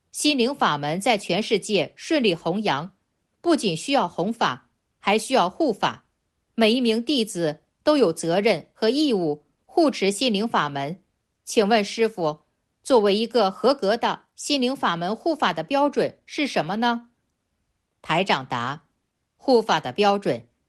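No technical faults can be heard anywhere in the audio.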